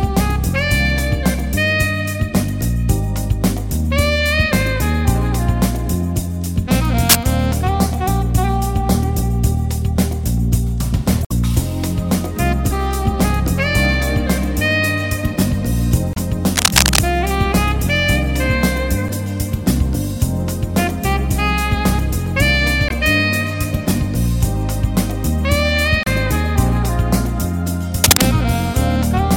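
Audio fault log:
7.09–7.27 s, 16.56–16.99 s and 28.04–28.26 s: cable scratch noise. Dense, ragged bursts of crackle and rustle sit over the sound. The first and last bursts are a little louder than the sound itself. The middle one is about as loud and lasts longest, nearly half a second. The likely cause is a worn cable, connector or control being moved. Its contact resistance jumps about, and those rapid changes come through as scratching.
11.22–11.32 s, 16.13–16.17 s, 19.06–19.10 s, 22.87–22.92 s and 26.03–26.07 s: damaged data in a compressed stream. Each is a short chirp or blip lasting about 40 to 100 ms. Part of the compressed stream was corrupted at these points. The decoder misreads those frames and loses sync. It outputs garbage briefly, then finds the next frame header and carries on.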